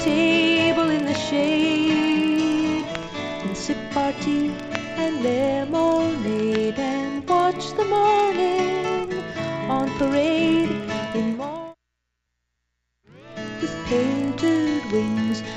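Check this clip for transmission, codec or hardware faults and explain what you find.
One fault runs through the whole clip. The resampler restarted on every block: each 40 ms block, apparently converted from 16 kHz to 48 kHz, gets edge errors, producing a 25 Hz tick-buzz that, unlike mains hum, disappears in silence.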